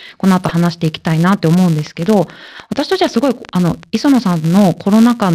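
From the very start and through all of this speech, a filter restarted on every block leaves a steady 188 Hz buzz. The filter loses its memory at each block boundary and starts again from silence, so a small transient opens every block; the rate fits a 256-sample block at 48 kHz. On a waveform these show as tiny regular steps at each boundary. On a spectrogram they form faint horizontal harmonics of 188 Hz that grow louder and quieter with the speech.

From 0.44 to 0.51 s, DAB burbling gives a short patch of burbling. Weak reception let a small scattering of bit errors slip past error correction into the MP2 data, and a handful of frames decoded with wrong samples. On a spectrogram this appears as isolated rectangular blocks of energy in narrow bands, each about one frame wide, over the normal speech pattern.

From 1.79 to 5.28 s, a train of clicks ticks over the sound, in the pauses as well. 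The clicks come about 6.6 per second at uneven spacing, around twenty in all, each peaking about 5 dB above the signal. The likely cause is interference from nearby equipment or a faulty connection injecting pulses. The waveform shows sharp, similar-shaped spikes. On a spectrogram they are thin vertical lines running across all frequencies.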